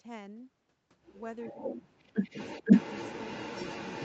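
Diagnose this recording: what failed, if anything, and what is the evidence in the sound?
Echo leak at the call-processing stage: a delayed copy of the speech returns from 1.41 to 1.82 s, trailing by 434 ms, and again from 2.24 s to the end, trailing by 503 ms, each about 10 dB below the direct speech. The far end's echo canceller likely passed residual loudspeaker pickup back into the call.

Speech suppressed in double talk, also in call processing: the speech level falls from 1.52 to 2.34 s, dipping by about 25 dB, and briefly again from 2.63 to 2.67 s, by about 20 dB. Both dips overlap returning echo, so the canceller likely attenuated near-end speech along with the echo it was suppressing.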